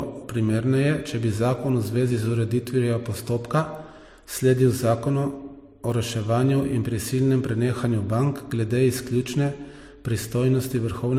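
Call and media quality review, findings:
Throughout: MP3 artefacts layered with HE-AAC artefacts, nothing above 18.5 kHz. Two artefact signatures rather than one codec's, so likely transcoding between lossy codecs, fitting that chain.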